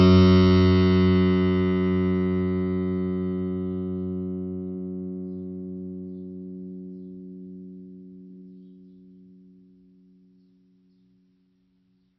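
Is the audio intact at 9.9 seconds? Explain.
No. At 9.9 seconds, as across the whole music clip, the damage is likely from heavy MP3 compression, pointing to a very low bitrate near 24 kbps. Starved of bits, the encoder removes everything above 5.8 kHz and switches weak frequency lines on and off frame to frame, leaving the sound dull, watery and swirling, with smeared attacks.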